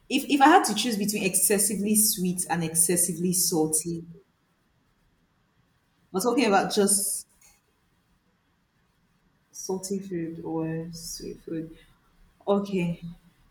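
Nothing stood out as a technical fault on listening to this speech recording.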